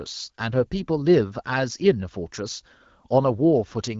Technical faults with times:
none

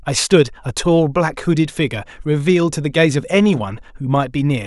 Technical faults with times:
none

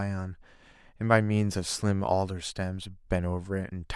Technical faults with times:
none

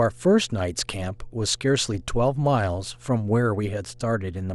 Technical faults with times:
0.00-4.54 mains hum

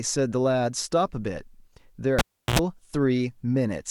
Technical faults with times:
2.19-2.59 cable pulled and plugged in

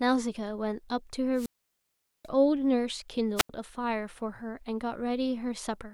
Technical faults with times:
1.33-2.29 wireless microphone squelch dropout
3.36-3.49 wireless microphone squelch dropout

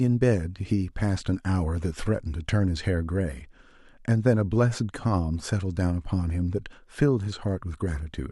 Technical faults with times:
none

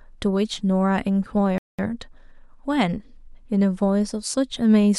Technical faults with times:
1.58-1.79 playback stall

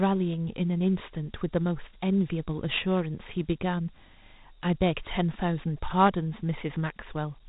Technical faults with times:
0.00-7.48 Dialogic VOX ADPCM

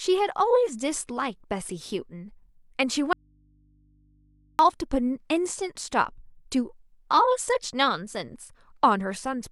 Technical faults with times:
3.13-4.59 audio dropout to a faint residue

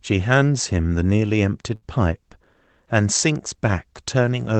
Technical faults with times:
1.75-1.85 burst of packet loss

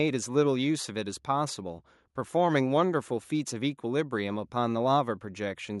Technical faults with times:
none

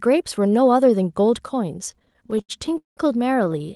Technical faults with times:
1.91-2.99 repeated stalls (stutter)
3.45-3.70 repeated stalls (stutter)

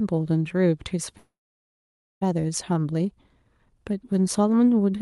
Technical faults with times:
1.17-2.23 call audio freeze

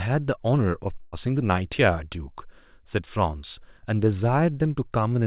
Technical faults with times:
1.01-1.15 burst of packet loss

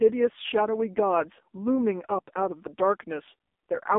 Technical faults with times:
0.00-3.98 AMR narrowband mobile codec

